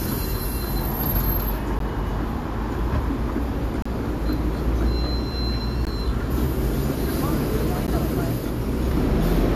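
Short hard-edged silent holes at 1.79, 3.82 to 3.86, 5.85 and 7.87 s are a gap between stream segments. Misaligned timestamps at two-second boundaries pad silence, and unlike a dropout, no sound goes missing.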